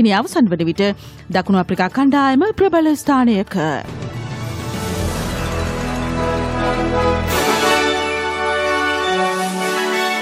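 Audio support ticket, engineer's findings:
No technical faults found on listening; signal path behaves as expected throughout, no component action needed.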